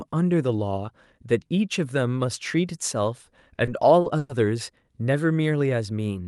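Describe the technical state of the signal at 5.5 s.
At 5.5 s the speech comes through the call path intact, with no dropout, glitch or other fault at that moment.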